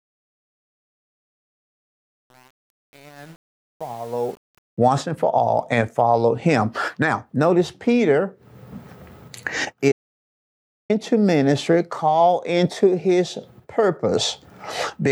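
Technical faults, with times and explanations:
0.0 to 4.78 s, truncation distortion on a fade: the fade-in rises smoothly, but its quiet start is gritty until it clears before "once and for all". The gain stage kept about 7 bits without dither. Unlike broadband noise, the grit follows the level and vanishes as it rises.
9.92 to 10.90 s, audio dropout to silence: the sound cuts out mid-flow for 0.98 s and returns on "ministry called into his". The gap is silent with no room tone, unlike a natural pause or a noise gate. The likely cause is a lost input or link while recording continued.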